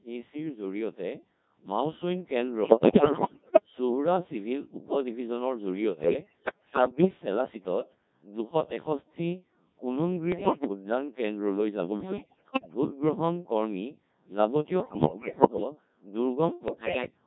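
Throughout, the speech shows heavy Codec 2 vocoder damage. It is resynthesised from pitch, voicing and spectral envelope parameters, so it sounds robotic and buzzy, consistent with the 1.3 kbit/s mode. Bit errors on digital voice radio occur at 2.65–3.66, 6.04–7.08, 10.32–10.68, 12.00–12.74, 14.80–15.64 and 16.68–17.10 s. The corrupted frame parameters make pitch, level and timbre jump, breaking the sound into warbles and bleeps.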